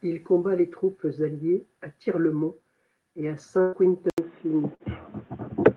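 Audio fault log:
3.61 to 3.76 s and 4.75 to 4.83 s, burst of packet loss: consecutive packets failed to arrive in time, so the receiver stretched the last sound for about 112 ms and then 50 ms, letting it fade, before resuming further on, with about 120 ms and 60 ms of audio skipped.
4.10 s to the end, input switched to a poorer device: the input likely moved to a narrower-band microphone or headset profile, leaving an 80 ms silence at the switch; afterwards nothing is heard above 3.8 kHz, the tone turns dull, and a faint new noise floor sits roughly 35 dB down at an unchanged level.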